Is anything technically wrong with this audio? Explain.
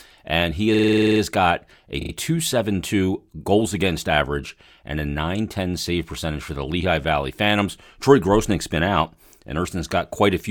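Yes, there are two faults.

From 0.74 to 1.21 s, just after "and he" and before "got a", there is a system hang loop. The playback stalled while the hardware kept cycling one 46.4 ms piece of the buffer, which fits a 2048-sample buffer. It repeats ten times, giving a rattling buzz at 21.5 Hz, with essentially no audio lost.

From 2.00 to 2.12 s, right after "got a", there are repeated frames. A block of about 27.6 ms of compressed audio was delivered and decoded three extra times, so the same fragment stutters in place and the clip runs 113 ms longer than it should.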